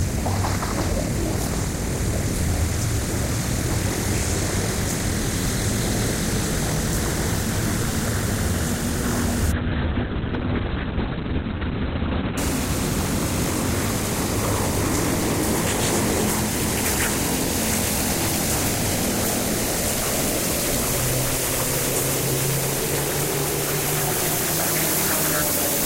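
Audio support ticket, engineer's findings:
Call bitrate drop, 9.52–12.43 s: audio turns watery and muffled, top end capped near 4 kHz for 2.84 s, fitting an encoder starved to roughly 6 kbps. No gaps, unlike packet loss.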